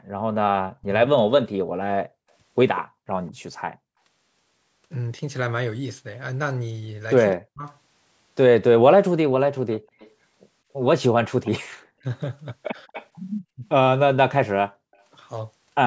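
From 0.07 to 0.88 s, an echo canceller likely mistook simultaneous talk from both ends for its own loudspeaker echo and clamped down on both, so this is speech suppressed in double talk. The voice dips, around 0.4 s of it pushed down by as much as about 40 dB.

From 2.75 to 3.32 s there is an echo leak. A loudspeaker end's canceller likely did not fully remove what its microphone picked up, and the residue came back. A faint copy trails the speech by 197 ms, about 20 dB below it.

From 7.35 to 7.65 s the double-talk suppression returns, gouging out roughly 0.3 s by up to about 40 dB.

From 9.73 to 10.11 s and from 11.44 to 11.68 s, the echo leak recurs at a 256 ms delay, about 25 dB down.

From 11.90 to 12.05 s, suppression cuts roughly 0.15 s, by about 40 dB at worst. From 12.87 to 12.92 s, a brief dip of about 30 dB follows.

From 12.93 to 13.06 s, immediately after that dip, the echo leak returns at 256 ms, about 20 dB under the speech.

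Through all of this, the call's microphone path tops out at 8 kHz.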